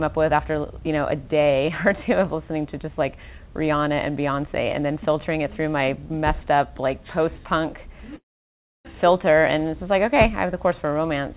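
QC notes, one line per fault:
8.16–8.87 s, call audio freeze: a short buzz or hiss continuing the last sound fades into 640 ms of silence. The audio then resumes where it stopped, with nothing lost, only 0.69 s late. Likely a jitter buffer that ran empty while packets were held up.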